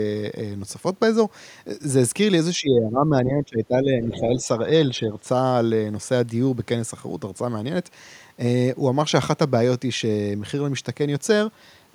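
Speech suppressed in double talk runs from 2.57 to 4.48 s: the speech dips by roughly 15 dB and loses level in patches for about two seconds. The likely cause is an echo canceller turning everything down when both sides talked at once and it could not separate the near talker from the loudspeaker echo.

The other side's voice leaking through appears from 4.14 to 4.20 s as a brief scrap of a second voice roughly 20 dB below the speech. It is likely residual loudspeaker echo that the canceller left in the microphone signal.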